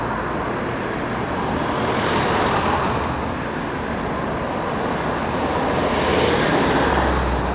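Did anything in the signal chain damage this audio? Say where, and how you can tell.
No, nothing in the chain damaged it: the sound came over a G.711 mu-law call path at 64 kbps, which accounts for the band ending at 4 kHz, and no stage shows any damage.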